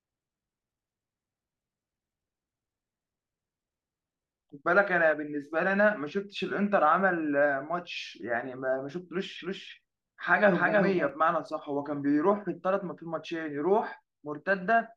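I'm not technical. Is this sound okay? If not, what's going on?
No. From 9.41 to 11.09 s the speech is doubled: a slightly quieter copy trails about a third of a second behind, like a clean echo that starts and stops suddenly. This doubled audio track likely comes from the same sound being recorded twice through a slower second path.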